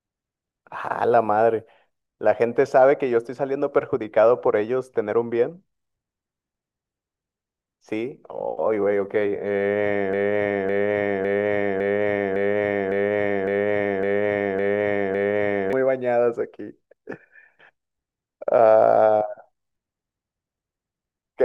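A stall in the player, encoder or stream most likely left it resending the last fragment it held, producing a broken-record loop from 10.13 s to 15.73 s. A 0.56 s slice of speech repeats exactly, back to back, ten times, so the same short piece stutters on for over five seconds with no change. Whatever speech should have followed during that stretch never arrives; it is simply lost, and the clip resumes at 15.73 s.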